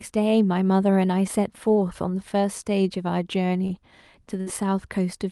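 Short concealed packet loss occurs at 3.67 to 3.71 s in this speech. A packet arrived too late for the decoder, so the receiver covered the hole by extending the last stretch of sound for about 15 ms, then cross-faded back into real audio. Roughly 20 ms of the original is gone. It comes across as a brief smear or wobble.

A burst of packet loss follows at 4.41 to 4.48 s. Several consecutive packets failed to arrive in time. The receiver carried the last sound forward for about 53 ms while fading it down, producing a held buzz if the sound was voiced or a dwindling hiss if it was not. Playback then picks up about 60 ms further along, so that slice of speech is skipped rather than delayed. The call path's Opus coding limits the audio to about 12 kHz, and its coding noise suggests a bitrate around 40 kbps.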